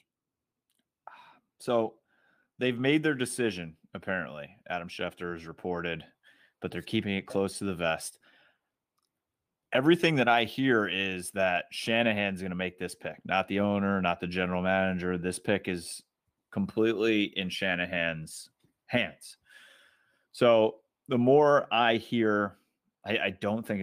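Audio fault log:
Nothing stood out on listening to this speech recording.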